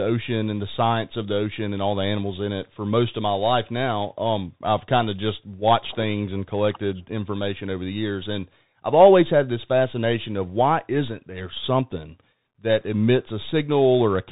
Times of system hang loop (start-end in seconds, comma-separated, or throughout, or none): none